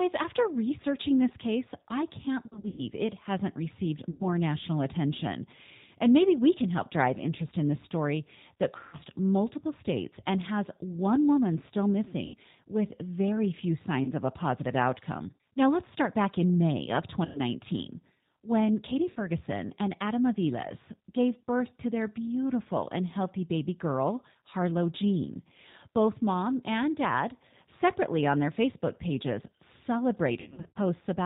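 Throughout, the G.729 codec at 8 kbit/s gives the speech a rough, synthetic edge, and the spectrogram shows nothing above 4 kHz. VoIP packet loss concealed by the speech codec appears at 2.46–2.84 s (after "this case I can't"), 4.10–4.28, 8.79–8.98, 12.26–12.35, 14.04–14.12, 17.25–17.41, 19.10–19.19 and 30.40–30.78 s. In each, the decoder repeats its last pitch and filter at falling gain, so the sound smears into a buzzy tone or coloured noise that fades. On a spectrogram these show as flat, repeated harmonics, and on the waveform as a decaying envelope.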